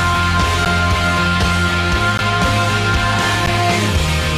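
Short ticks at 0.65 s, 2.18 s and 3.46 s are blocks of digital silence: about 10 ms, 15 ms and 10 ms of silence. The sound cuts out and back abruptly with no fade.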